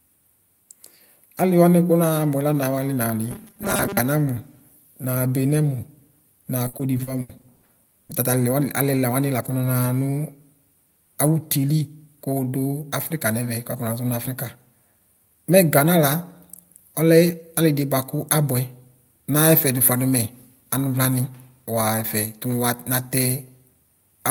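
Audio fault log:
3.31–4.01 s, robotic sound from repeated short buffers: new audio likely arrived too seldom, so playback kept looping the last 5 ms, and roughly half the span is repeats rather than real speech. That looping imposes a fixed, metallic 200 Hz buzz.
6.67–8.11 s, repeated packet loss (robotic sound): packets went missing again and again, each hole patched by extending the preceding sound. About 420 ms, some 29% of the span, is filled-in audio, the longest gap 80 ms, leaving the speech choppy and robotic.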